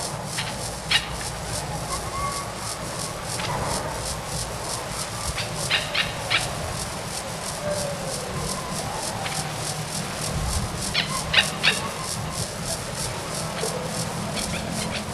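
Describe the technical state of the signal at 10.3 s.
At 10.3 s the signal carries periodic clock jitter, present across the whole clip rather than at this moment alone. A steady interference tone, somewhere around 1 kHz, is modulating the converter's sampling clock, so each spectral component picks up sidebands spaced roughly 1 kHz above and below it. Higher-frequency content is affected more strongly. The result is a rough, metallic edge riding on the sound, which disappears whenever the sound falls silent.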